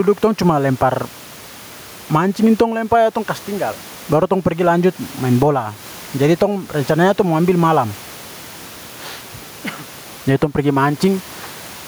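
Right through the recording there's gain pumping. The room noise, normally about 33 dB below the speech, swells up in every pause and then gets yanked down the moment someone talks again, a swing of something like 15 dB. The likely cause is input gain set way too hot, with a fast limiter or compressor clamping down on each loud syllable. That leaves the speech squashed and flat in level, with the background breathing in and out around it.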